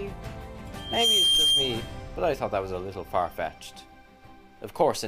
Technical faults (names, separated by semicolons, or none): loudspeaker feedback squeal